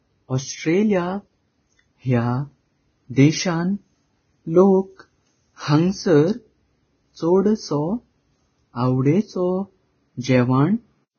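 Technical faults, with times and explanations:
Throughout, Vorbis compression: grainy, hissy speech with smeared attacks and nothing above 6.6 kHz, likely low-bitrate coding quantising treble into noise; a spectrogram shows a hard ceiling and speckled highs.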